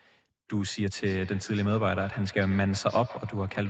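From 0.96 s right through to the end of the speech at 3.69 s, there's feedback echo between two devices. A second device in the room is playing this call back out, and the mic picks it up again. Each word returns roughly every 150 ms, thinner and more ringing each pass, peaking at about 17 dB below the speech. The local echo canceller can't catch it because that sound never came out of its own speaker.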